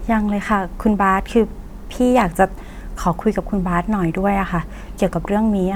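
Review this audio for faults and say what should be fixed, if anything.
Nothing in this speech recording needs fixing. No technical fault can be heard at any point, so no preventive step is needed.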